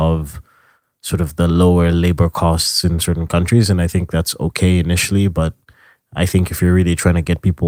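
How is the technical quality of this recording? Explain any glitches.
No technical glitches can be heard in the recording.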